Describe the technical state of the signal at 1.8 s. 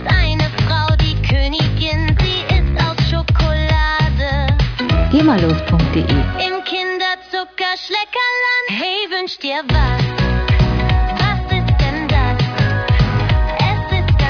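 At 1.8 s the signal is intact, with no technical fault to be heard at that moment.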